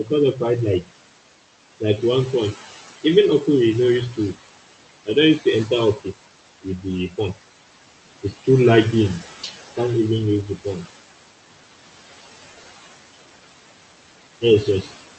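Noise suppressor artifacts run through the whole clip. The suppressor pulls down the room noise, which sits about 12 dB below the speech, by about 17 dB between phrases and lets it back up under them, so the residue pumps.

Speech cut by the noise suppressor occurs at 0.04–0.41 s, 5.06–6.07 s, 6.62–7.37 s, 9.43–9.78 s and 14.41–14.91 s. The suppressor misread quiet speech as noise and lowered it by up to about 8, 14, 16, 14 and 10 dB respectively. Roughly a tenth to a fifth of a second sounds swallowed in each stretch. The call codec also cuts off the highs near 8 kHz.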